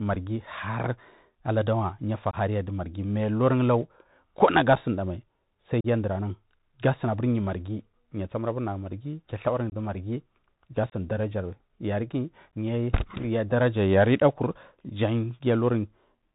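Bluetooth CVSD headset codec, present from start to finish: the speech has been squeezed into the narrowband headset format, a one-bit delta modulator whose adaptive step tracks the waveform up or down, which fits a 64 kbps link. Everything above 4 kHz is gone, so the voice sounds boxed in. Sibilants come through scratchy, louder bright passages smear where the step size cannot keep up, and a grainy hiss sits under the speech.

Unconcealed Bluetooth headset packet loss, at 2.31–2.36 s, 4.76 s, 5.81–5.86 s, 9.70–9.74 s, 10.90–10.94 s and 12.51 s: voice packets between headset and phone went missing and were filled with silence rather than patched over. The holes are 22.5, 7.5, 37.5, 22.5, 22.5 and 15 ms long, pointing to anywhere from a single packet to a handful. Each gap has hard edges that can tick, and the speech briefly returns quieter as the codec's step size rebuilds.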